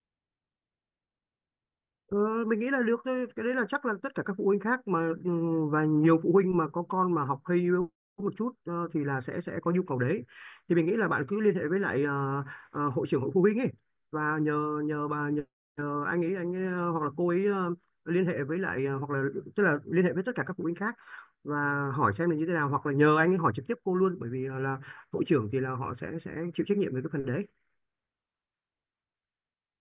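A speech recording, and nothing is technically wrong with it.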